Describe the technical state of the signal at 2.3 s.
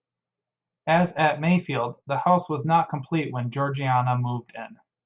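At 2.3 s the signal is intact, with no dropout, clipping, distortion or other fault audible at that moment.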